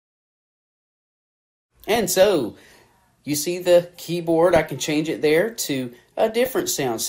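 Throughout, the sound is dull with a steady granular gurgle and missing upper bands, likely MP2 compression at a low rate, around 80 kbps. From 1.81 to 2.32 s and again from 4.49 to 4.71 s, DAB burbling adds short blips of noise. Unlike the steady codec grain, these are brief bursts where single sub-bands blip with noise, which fits reception errors slipping past error correction.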